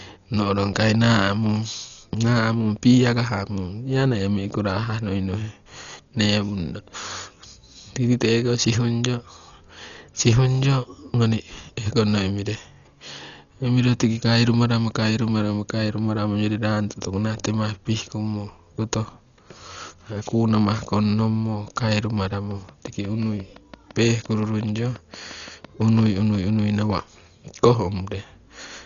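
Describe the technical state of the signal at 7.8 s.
At 7.8 s the speech is dull and band-limited, as it is for the whole clip. Nothing sounds above about 6.9 kHz. A rough, fluttering noise sits around the voiced tones. The likely cause is heavy Dolby Digital compression. At a rate that fits roughly 40 kbps, the encoder narrows the band and leaves many frequency lines without mantissa bits. The decoder fills those lines with dither noise, which gives the flutter.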